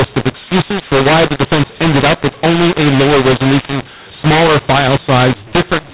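A mu-law and A-law mix-up runs throughout the speech: samples written with the A-law curve are being expanded with the mu-law curve, so levels are scrambled and the quietest values jump well above silence. Speech sounds harsh and gritty, and pauses fill with hiss, within a band ending near 4 kHz that fits 8 kHz telephone sampling.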